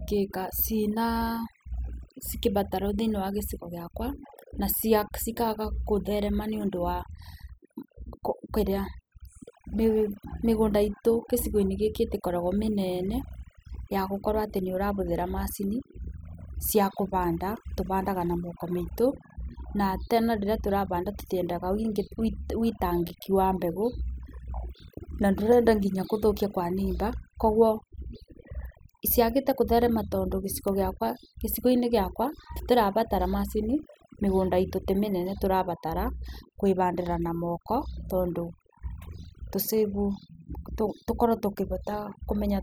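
From start to finish, the speech carries the marks of overdone noise removal. A noise reduction stage was pushed too hard on a noisy source. Wherever a frequency band sits close to its noise estimate, it cuts that band deeply or mutes it. Soft parts of the voice fall into that range and vanish with the noise. Between phrases the background drops and breaks up into twinkling specks.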